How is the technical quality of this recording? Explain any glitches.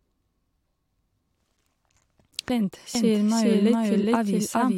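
The recording has two clear glitches in the second half.

At 2.49 s the speech jumps forward with a small blip, likely a stream segment skipped. The waveform shows an abrupt splice, and the spectrogram shows a vertical seam.

From 2.95 s to the end, a doubled audio track follows the speech about 0.4 s behind at roughly equal level. In the spectrogram the full-band pattern repeats, shifted right, and it starts abruptly.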